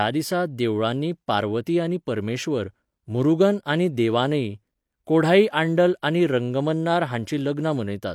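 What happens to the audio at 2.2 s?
Nothing goes wrong at 2.2 s; the speech plays through that moment intact, with no dropout, click or distortion.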